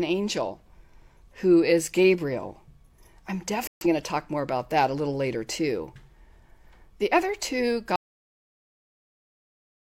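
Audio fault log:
3.67–3.86 s, corrupt frame muted: the speech breaks off abruptly for 0.19 s, a span that points to three consecutive compressed frames the decoder rejected and the player replaced with silence, just before "going to talk more". The spectrogram shows a sharp-edged blank column and the waveform a flat gap, with timing kept intact.
7.96 s to end, audio dropout to silence: right after "other two" the speech cuts out mid-flow into silence, with no room tone, and never returns for the last 2 s. The likely cause is a lost input feed while recording continued writing silence. The waveform goes dead flat and the spectrogram turns uniformly black.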